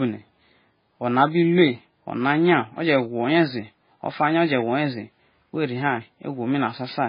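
From start to finish the speech carries heavy MP3 compression artefacts. Nothing reaches above 5 kHz, so sibilants lose their hiss and the sound is dull. Weak frequency lines flicker in and out between frames, giving a watery, swirling texture with metallic chirps on s sounds and smeared consonant onsets. This damage is consistent with a very low bitrate, likely around 16 kbps. A spectrogram would show a hard ceiling at 5 kHz and patchy, blocky energy below it.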